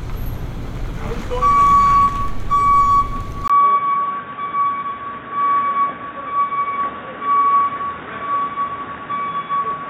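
At 3.48 s the input likely switched to a poorer device: after a 20 ms gap, nothing above 3.8 kHz remains and faint background noise appears.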